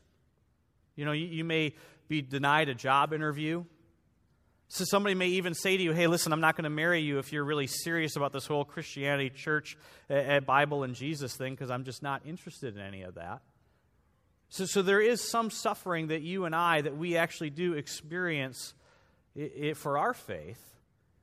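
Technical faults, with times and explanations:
No technical faults are audible in the speech.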